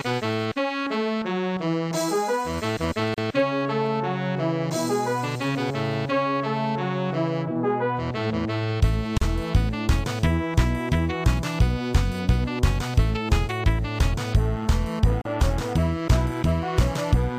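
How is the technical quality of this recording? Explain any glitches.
The recording is marred by three short dropouts, each a gap at a join of encoded pieces. At 3.14 to 3.18 s, 9.18 to 9.22 s and 15.22 to 15.25 s the sound cuts to silence for about 36 to 37 ms, with softened edges, then resumes exactly where it stopped. The six-second spacing points to separately encoded segments spliced together untrimmed, so each join keeps the encoder's start-up delay and end-of-segment padding as dead air.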